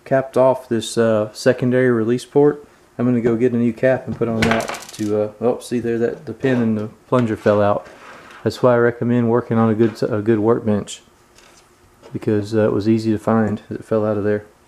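A corrupt frame decoded at 12.39 to 12.42 s and again at 13.47 to 13.51 s: each time, flipped bits in a single compressed frame were decoded anyway, misplacing energy across frequencies for about one frame length. Each is heard as a brief chirp or noise burst, the second noticeably louder.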